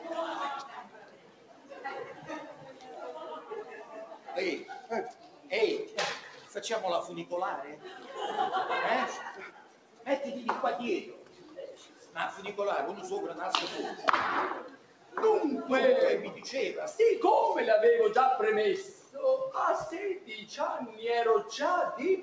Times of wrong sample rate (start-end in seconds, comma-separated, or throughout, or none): none